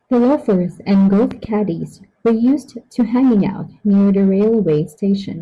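At 1.31 s a loud pop cuts through the speech. A second pop follows quickly. Both are over by 1.47 s. They peak a few decibels above the speech, which continues underneath. The cause is likely a sudden voltage pulse added to the signal.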